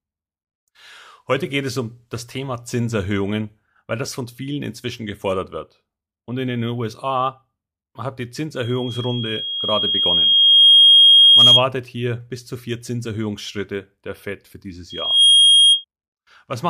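Speech is interrupted by a piercing tone near 3.3 kHz from 8.63 to 11.66 s. It follows "hat die" and swells over about two seconds to roughly 15 dB above the voice before "hier bis zu vier". The tone returns from 14.90 to 15.85 s after "für dieses", this time reaching full strength within a fraction of a second. This is loudspeaker feedback squeal: the microphone picks up the loudspeaker it feeds, and at 3.3 kHz the loop gain exceeds one, so that tone builds on itself.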